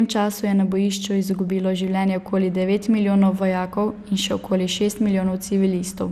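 Generation loss throughout: hollow, swirly speech, blurred attacks, nothing above 14.6 kHz, worse than a single encode; likely about four MP2 passes near 96 kbit/s.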